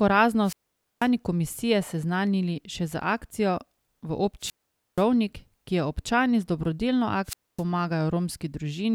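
Wireless microphone squelch dropouts occur at 0.43 to 1.09 s (before "komisije seznanili še z"), 4.40 to 5.04 s (after "še z akcijo v") and 7.25 to 7.63 s: the radio link fades, hiss rises, and the receiver mutes for about 490, 480 and 260 ms.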